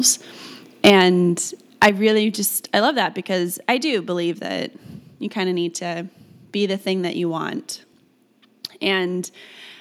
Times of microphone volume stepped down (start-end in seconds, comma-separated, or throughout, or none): 0.90, 1.89